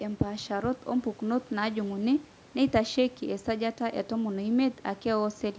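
Listening through this speech recording, which has passed through a call's microphone processing, nothing stood out as a technical problem.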